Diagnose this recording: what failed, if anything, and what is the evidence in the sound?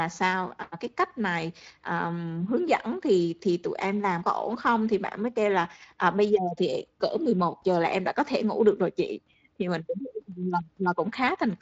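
Nothing failed in this recording, and the sound gives no evidence of any fault.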